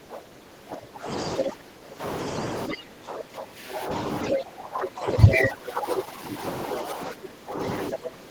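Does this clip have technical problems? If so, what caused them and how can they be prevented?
Yes. Speech suppressed in double talk: with both sides talking at once, the echo canceller likely could not tell the near talker from loudspeaker echo and turned everything down. From 0.0 to 2.02 s the speech dips by up to about 20 dB for roughly a second and a half in total, and from 2.69 to 8.3 s it drops by up to about 15 dB. Better double-talk detection, or a headset that removes the loudspeaker echo path, prevents this.

Other side's voice leaking through: the echo canceller likely left part of the loudspeaker playback in the microphone signal, so a second voice comes through at 1.11 to 1.43 s at about the same level as the speech, at 2.26 to 2.77 s about 10 dB lower, and as a brief scrap at 4.26 to 4.30 s, also about 10 dB lower. Lower loudspeaker volume, headphones or a better-converged echo canceller prevent this.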